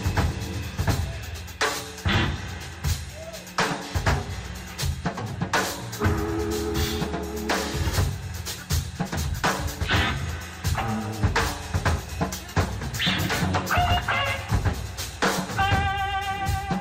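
No technical faults can be heard anywhere in this audio.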